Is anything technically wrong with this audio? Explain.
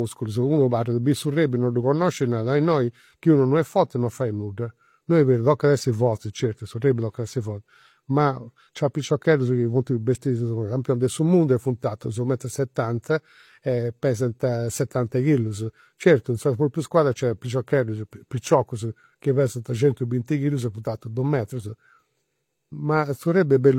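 Yes. Throughout the speech there is transcoding between lossy codecs, likely an AAC-LC encode near 64 kbit/s re-encoded as HE-AAC near 32 kbit/s. The second codec spends bits on the first codec's artefacts, so both sets of artefacts stack, and nothing remains above 16.3 kHz.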